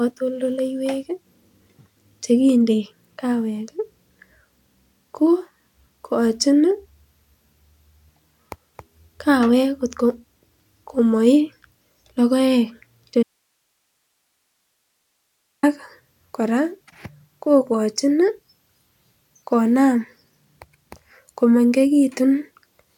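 At 13.23 s the speech cuts out abruptly and stays gone until 15.63 s, a gap of about 2.4 s. This is an audio dropout to a faint residue. The wanted signal is lost, but the path after the break stays live, so the gap holds only low-level hiss, roughly 55 dB below the speech. The cut and the return are both sudden, not a pause or a fade. The likely cause is an interruption upstream of a still-active input.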